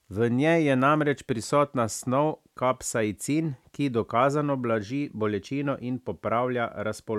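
No technical faults can be heard anywhere in the recording.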